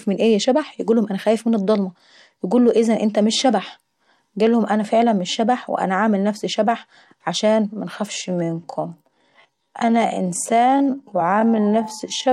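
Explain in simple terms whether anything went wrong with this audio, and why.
From 8.08 s to the end at 12.32 s, the speech abruptly slows to about 0.58 times its normal pace while the pitch stays the same. It drags. This is a time-stretched section, likely from software lengthening the audio by repeating short slices.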